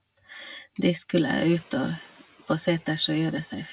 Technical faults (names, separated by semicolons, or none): noise suppressor catching up